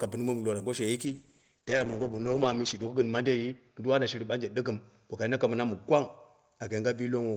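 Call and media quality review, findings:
Call bitrate drop from 1.07 s to end: speech turns rough and watery and loses highs above 8 kHz. Opus encoder falls from 32 to 8 kbps after bandwidth estimate drop; floor held 1.4 s. Continuous coarseness without gaps or clicks rules out packet loss.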